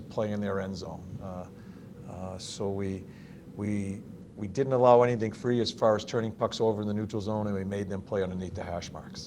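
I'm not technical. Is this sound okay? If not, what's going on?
No. From 4.23 s to the end, a call bitrate drop sets in. The connection squeezed the sound into far less data, so it turns rougher and duller, losing its crisp top above about 12 kHz. Unlike dropouts, nothing goes silent. The sound just degrades continuously.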